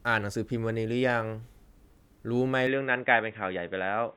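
At 2.67 s the speech turns boxy through to the end. Nothing above 3.8 kHz, a faint new background noise, no gap or level jump. Likely the input switched to a poorer device. A spectrogram shows the upper band abruptly cut off there.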